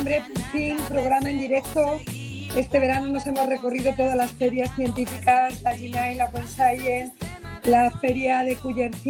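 The signal runs without any audible technical fault, holding steady level and continuity throughout with no break or disturbance in its playback.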